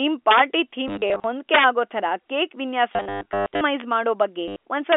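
Right at the start, 0.31 to 0.40 s, there's a harsh crack that's integer overflow. A loud peak pushed past the top of the integer range, about 2 dB over, and wrapped to the opposite sign instead of being held, so the waveform flips across the full range. It comes back worse from 1.54 to 1.65 s at about 6 dB over, then as brief snaps at 3.80 s and 4.92 s. All of these are much sharper than ordinary clipping.

In between there's packet loss with the last packet repeated. From 0.88 to 1.24 s short gaps are scattered around, each patched by replaying the previous chunk. The sound stutters robotically. The worst stretch runs from 2.93 to 3.61 s and includes a 120 ms run with a steady buzz near 100 Hz, which fits 10 ms packets. A final 80 ms stutter comes at 4.48 s. All of it sits inside a narrow 300 Hz to 3.5 kHz telephone band.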